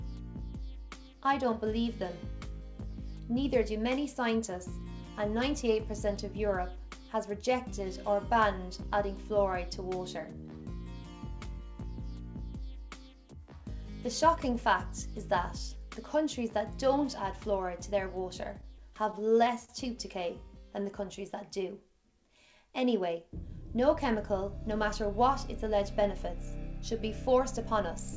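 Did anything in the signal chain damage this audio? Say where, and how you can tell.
Yes, at the network and jitter-buffer stage of the call path. Between 18.44 and 19.71 s there are repeated stalls (stutter): eight brief hitches, the longest about 39 ms, where the last sound is held and stretched while the buffer waits for late packets, adding roughly 107 ms in total. Unlike packet loss, nothing is cut out; the audio drags rather than skipping. The band stops at 8 kHz throughout, consistent with G.722 at 64 kbps.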